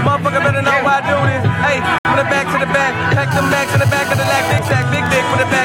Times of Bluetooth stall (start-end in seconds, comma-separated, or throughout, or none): 1.98-2.05